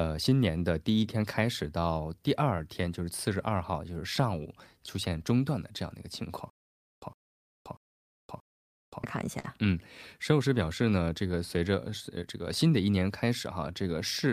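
Across the whole speech clip the tempo sags unevenly with faint hiccups: clock drift between sender and receiver, the sender running roughly 4% slow, so the receiver's jitter buffer keeps draining. From 0.30 s to 14.28 s those hiccups are repeated timing corrections, the receiver repeating short pieces so playback runs at 97% speed and gains about half a second overall. Between 6.50 s and 9.04 s a 111 ms burst returns every 634 ms, four times, with 523 ms of dead silence between each. This stutter with silent gaps likely comes from a stalled stream replaying its last fragment at each retry, and the audio due in that time is lost. At 9.39 s to 9.46 s one sound is held 44 ms too long with a slight buzz or dip, a short stall from a late packet. The buffer ran empty and the last sound was stretched until the packet arrived, so nothing is missing.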